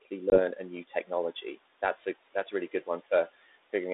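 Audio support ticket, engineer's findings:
Noise suppressor artifacts, whole clip. Background dropped by about 16 dB between phrases, swelling back under speech. Suppressor gain riding frame by frame. Spectrogram: noise floor pumps in step with speech energy. Waveform: gaps close to flat, floor lifting at each phrase onset. Room noise underneath sits about 20 dB below speech before processing.

Packet loss on the ADPCM call, 0.30 s. A 20 ms hard-edged silence, about one packet's worth, then speech returns with brief, slight distortion, settling by 0.40 s. Predictor and step size desynced by the hole and re-adapting. Spectrogram: clean vertical blank strip. Waveform: abrupt dropout. Band limit near 3.7 kHz fits a 32 kbit/s G.726 line.

Speech cut by the noise suppressor, 0.88 to 1.08 s. Quiet speech swallowed and faint, around 150 ms affected in total, with the deepest dip about 10 dB. Suppressor mistook low-level speech for noise and attenuated it with the background. 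Spectrogram: harmonics and consonant energy fade into the floor. Waveform: envelope sags below neighbouring syllables, no hard edges.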